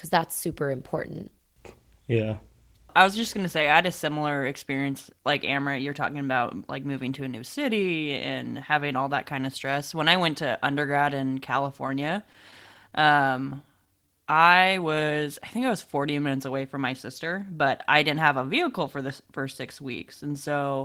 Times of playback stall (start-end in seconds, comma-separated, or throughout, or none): none